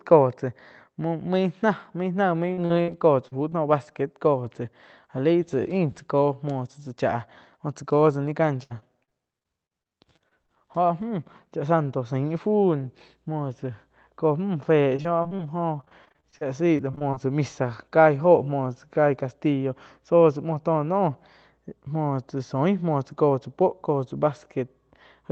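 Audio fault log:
2.53 s, 2.65 s, 3.28 s and 3.49 s: short concealed packet loss. Each gap lasts about 40 ms, except the last, which is 20 ms. Those slices of audio never arrived in time. The receiver filled each hole by extending the preceding sound, then blended back into the real signal. The result is a brief smear or wobble.
2.81 to 2.90 s: burst of packet loss. About 60 ms went missing in one run. The receiver covered it with roughly 64 ms of extended sound that fades as it goes, giving a held buzz or dying hiss. The audio then picks up further along, and the part in between is lost. It sits among the short gaps around it.
8.63 to 10.50 s, 14.96 to 15.41 s and 15.81 to 17.18 s: repeated packet loss (robotic sound). The first span has 13 gaps totalling 340 ms, the longest 64 ms. Patching covers about 17 percent of the span. The second has 5 gaps totalling 100 ms. The third has 16 gaps totalling 320 ms, ending just before "tsá misa". 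In both later spans about 23 percent is patched. The rapid patch after patch sounds choppy, with fragments missing.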